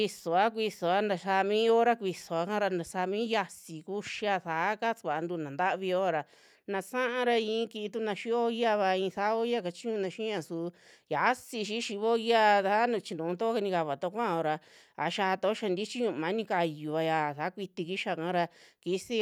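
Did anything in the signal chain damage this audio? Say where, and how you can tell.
No, nothing in this speech recording stood out on listening as damage from any stage of the signal chain.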